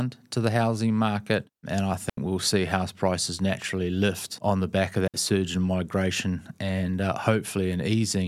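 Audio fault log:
2.10–2.17 s and 5.08–5.14 s, digital wireless dropout: the link lost data and the receiver muted, leaving clean near-silent holes of 80 ms and 62 ms, no noise burst.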